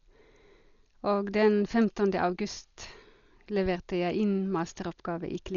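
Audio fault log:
Throughout: Dolby Digital compression, likely at about 40 kbps; heavy coding damage leaves nothing above 7 kHz, so the speech sounds dull with rough, fluttering noise filling stripped bands.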